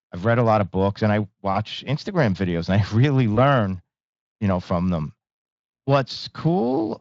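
VoIP packet loss concealed by the speech codec at 1.53 s, just after "of books and I", and at 3.35 s: the decoder extrapolates across roughly 20 ms gaps, briefly smearing the sound.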